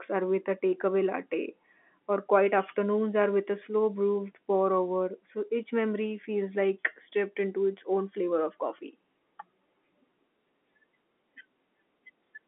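No faults are audible; just ordinary telephone-band speech.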